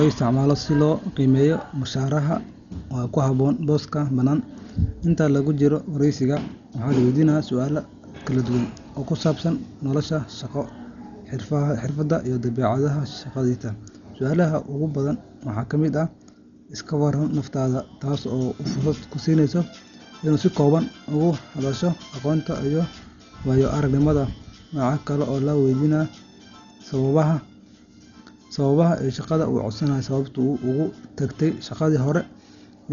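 Dolby Digital compression is the likely cause of the heavy damage throughout this speech. Nothing remains above 7 kHz, and a dull, rough, fluttering noise fits a bitrate near 40 kbps that leaves many frequency lines without mantissa bits.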